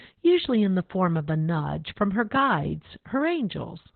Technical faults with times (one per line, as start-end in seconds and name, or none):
0.00-3.96 Opus voice compression